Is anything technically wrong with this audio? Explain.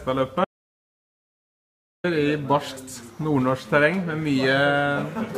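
Yes. An audio dropout to silence runs from 0.45 to 2.04 s, about 1.6 s long. The input was likely lost, through a disconnected device or failed link, while recording continued writing zeros. The sound cuts off abruptly into dead silence with no room tone, then resumes mid-flow, and whatever occurred in between is gone.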